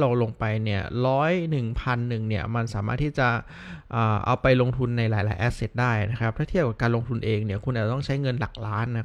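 Speech recording with no technical faults to report.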